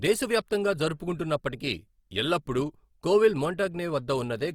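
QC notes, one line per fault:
Throughout: Opus compression, likely at a low rate in the region of 24 kbps. The speech has a grainy, rough texture, with harmonics smeared into noise-like fuzz, because the music-mode encoder keeps each band's energy but fills underfunded bands with folded or noise content. Unlike MP3 damage, there is less swirling and fewer watery holes in the spectrum. Unlike lower-rate speech-mode Opus, the bandwidth stays full, reaching about 20.3 kHz, so the sound is rough rather than muffled.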